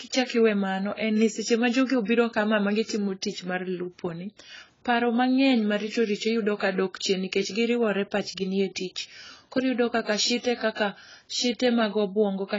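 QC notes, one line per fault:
Throughout, AAC compression: the speech sounds dull and smeared, with nothing above 7.6 kHz and a warbling, fizzy texture on sustained sounds and sibilants. This is likely low-bitrate AAC-LC, and the heavy damage fits a rate near 16 kbps. The encoder drops the top band and starves the rest of bits, so detail goes missing or is replaced by noise. A spectrogram shows a hard ceiling at 7.6 kHz, with patchy holes and blocky smearing beneath it.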